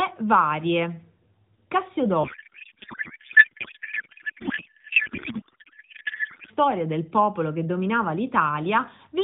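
From 2.24 to 6.51 s, ending just before "del popolo che dominava", a codec payload misread replaces the speech with garbled warble that barely tracks it, which fits octet-aligned AMR frames being unpacked as bandwidth-efficient. The spectrogram shows formants dissolving into smeared noise below 4 kHz.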